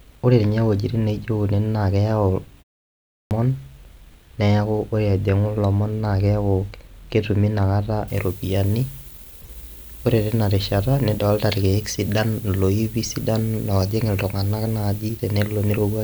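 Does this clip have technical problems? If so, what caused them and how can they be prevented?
Yes. At 2.94 s the sound comes back after a pause of only about 0.39 s and its first 370 ms or so are missing, so it cuts in abruptly until about 3.31 s. This is a clipped start after a pause: the output device dropped into a sleep state during the silence and had not woken or relocked when audio resumed. Here the onset itself is gone. Prevention: keep the output device active, or send a low-level keep-alive signal so it never idles.

From 8.08 s to the end, the treble is far too strong: thin, bright and hissy, with sibilants standing out. This is pre-emphasis left on. The high-frequency boost matches the FM 75 µs curve and reaches about 14 dB at 10 kHz relative to 1 kHz, and the complementary de-emphasis was never applied. A plain bright microphone or EQ would not follow that fixed curve or switch on at one point. 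Prevention: apply matching de-emphasis wherever pre-emphasis is added.

From 9.41 to 9.48 s there is a brief glitch. This is a corrupt frame decoded: bit errors in what sounds like a few compressed frames were decoded anyway, and the misread gains and codes scattered energy to the wrong frequencies. Unlike a dropout or concealed packet loss, unrelated sound appears for the length of the damaged frames. Prevention: check frame integrity and conceal or discard corrupted frames rather than decoding them.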